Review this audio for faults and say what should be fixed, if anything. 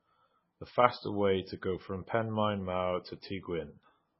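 Likely heavy MP3 compression throughout, at a rate fitting roughly 16 kbps: the treble is cut above 5.6 kHz and starved frequency lines leave the speech watery. Encode from the original source at a much higher bitrate to prevent it.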